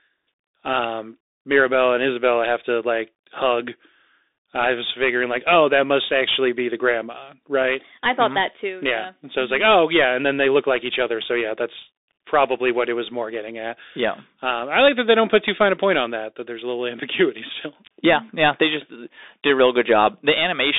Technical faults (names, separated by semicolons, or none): Bluetooth CVSD headset codec